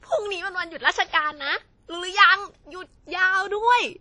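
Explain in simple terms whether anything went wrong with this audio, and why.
The speech sounds dull from start to finish, with nothing above 10.1 kHz. This is likely low-bitrate audio saved at a high bitrate. Re-saving cannot restore lost detail.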